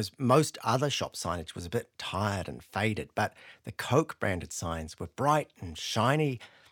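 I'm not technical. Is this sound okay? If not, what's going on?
Yes, nothing in this speech recording points to a technical problem with the signal.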